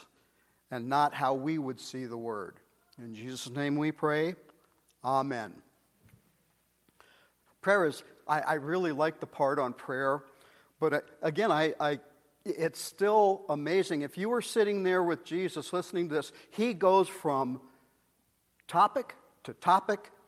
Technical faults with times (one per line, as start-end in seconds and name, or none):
12.88-12.92 short concealed packet loss